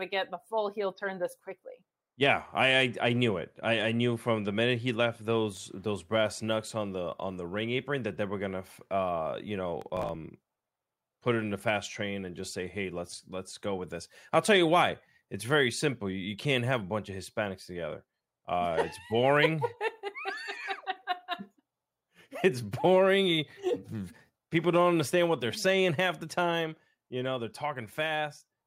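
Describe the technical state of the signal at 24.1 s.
At 24.1 s the speech signal is intact, with no audible fault at that moment.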